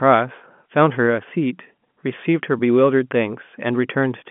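No faults detected in the speech; the path is ordinary G.711 A-law telephone coding at 64 kbps, carrying a 150 Hz to 3.4 kHz line band with nothing above 3.7 kHz and at most a faint codec trace.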